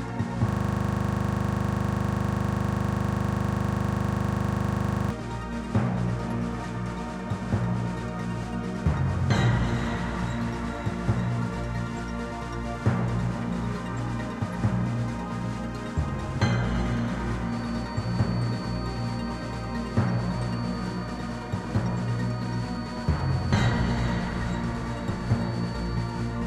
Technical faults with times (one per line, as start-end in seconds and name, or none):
0.49-5.10 system hang loop